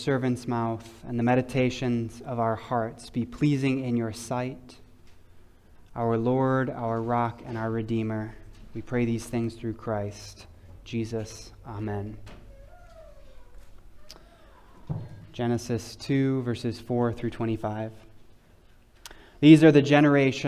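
Nothing here stands out as a technical fault; the sound just runs along without any glitch, dropout or distortion catching the ear.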